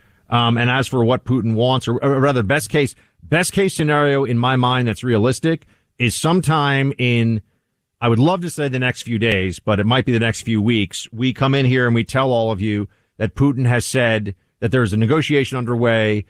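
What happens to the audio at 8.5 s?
Nothing goes wrong at 8.5 s: the speech there comes through intact, carried by the Opus voice coding at its full bandwidth with only light coding softness and no dropout, glitch or distortion.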